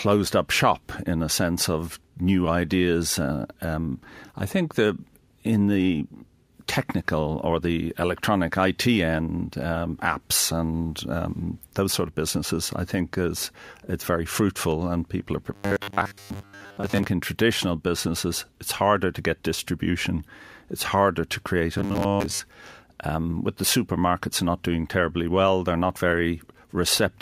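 From 15.54 to 17.05 s, after "fruitful and people are", and again from 21.78 to 22.40 s, after "it's harder to create", the speech becomes a rigid, metallic 100 Hz buzz. This robotic sound most likely comes from repeated short buffers: a 10 ms chunk is replayed in place of most of the missing audio.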